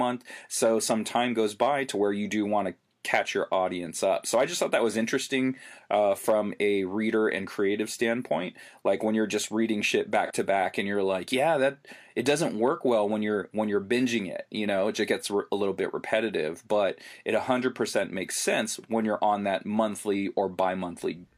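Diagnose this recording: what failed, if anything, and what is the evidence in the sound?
At the codec stage, an AAC frame loss with concealment occurs between 10.25 and 10.31 s, a gap of about 43 ms that fits a single lost frame. The decoder bridged it by reusing the last good spectrum with reshuffled signs or interpolated energy, so the speech briefly turns smeared and phasey instead of dropping out. Unlike a buffer underrun, it has no hard silence and no click at its edges.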